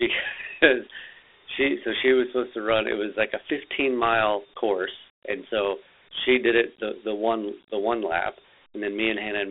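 From start to finish the speech carries Dialogic VOX ADPCM damage: each sample is squeezed to 4-bit steps, which fits a 32 kbps stream. Nothing sits above 3.7 kHz, the line band runs 300 Hz to 3.4 kHz, and a gritty hiss trails the speech.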